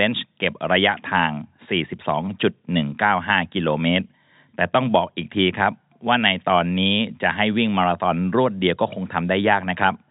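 No technical faults are audible in this speech clip, which carries the usual G.711 telephone band with nothing above about 3.8 kHz and only the faint, level-following grain that the coding leaves behind.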